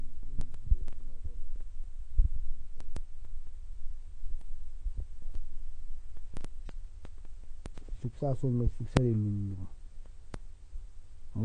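The speech has likely been through AAC compression at a low bitrate, with the encoder spending too few bits on each frame and discarding high-frequency content to cope. From start to finish nothing survives above about 10.1 kHz, so the top end is cut away and the voice sounds dull. The coding damage is plainly audible, leaving a smeared, processed texture that fits AAC-LC at around 32 kbps.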